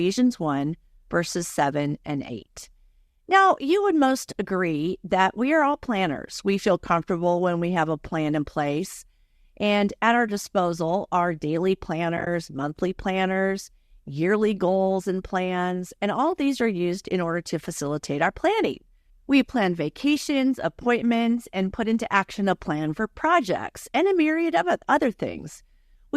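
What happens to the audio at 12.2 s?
AAC frame loss with muting occurs between 12.17 and 12.27 s. Pieces of the stream, likely low-delay AAC, go missing, and the decoder replaces each lost frame with silence. About 60 ms of audio vanishes in short gaps scattered across 100 ms, the longest lasting roughly 20 ms. Because neighbouring frames overlap, the sound fades out and back in at each gap, producing a brief, soft-edged stutter of dropouts.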